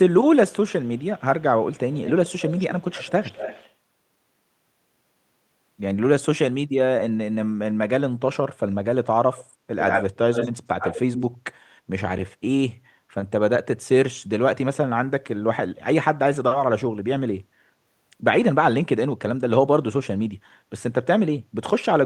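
Echo leak: a loudspeaker-side canceller likely let its microphone pickup through, so a delayed copy of the speech returns at 0.71–1.22 s (141 ms, faint), 1.73–3.71 s (214 ms, clearer), then 9.32–9.44, 9.79–10.51 and 10.79–11.26 s (92 ms), peaking near speech level.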